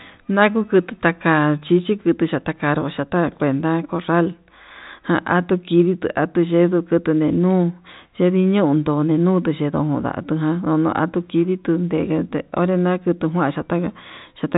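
No technical faults can be heard anywhere in the speech. The telephone coding path is audible as G.711 A-law at 64 kbps, with nothing above about 3.8 kHz and at most a faint quantisation noise riding under the signal.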